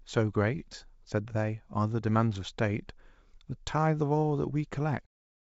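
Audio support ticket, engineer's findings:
No faults found: the audio tops out at 8 kHz, which fits the wideband call path, and the smooth fade-out ending at 5.07 s is a normal edit.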